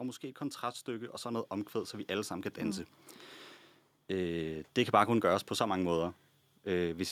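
A speech recording in which automatic gain rising sets in right after "måske et" at 0.38 s and continues until 2.91 s. The gain control judged the input too quiet and raised its level by about 7 dB over roughly two and a half seconds, so the voice and the background noise swell together. On a waveform the envelope widens steadily across that span. On a spectrogram the noise floor brightens evenly at all frequencies along with the speech.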